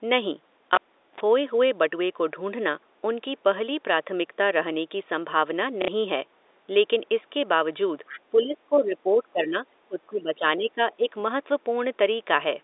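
Cable pulled and plugged in, 0.75 to 1.20 s: a pop as the live lead comes out, about 0.41 s of near silence, then a 46 ms burst of 50 Hz mains buzz while only the plug tip makes contact, and a second pop as the voice returns.

Packet loss with last packet repeated, 5.82 to 5.88 s: a 60 ms stretch, which fits two lost packets, is filled by replaying the last one, and the audio briefly stutters robotically.

Other side's voice leaking through, 8.06 to 8.20 s: a faint second voice, roughly 20 dB below the talker, slips in for a moment. It is likely loudspeaker sound from the far end that the echo canceller failed to remove from the microphone pickup.

Speech suppressed in double talk, at 8.31 to 9.55 s, 9.85 to 10.42 s, 10.58 to 10.79 s and 10.97 to 11.07 s: the talker's voice dips by around 15 dB, and by about 20 dB in the second stretch. This is likely an echo canceller turning everything down while both sides speak at once.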